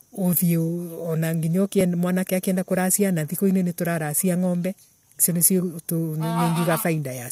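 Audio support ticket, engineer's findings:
Small skip in speech at 1.81–1.84 s. About 28 ms of audio missing, waveform jumps across the gap. Overlap between stream segments at a segment boundary (2.0 s segments). Player trims timestamp overlap, discarding sound that was never duplicated. Unlike a dropout, no silence is inserted. Unlike a buffer underrun, nothing repeats or stutters. Single event, not periodic. Check segmenter timestamps and player overlap-trim logic.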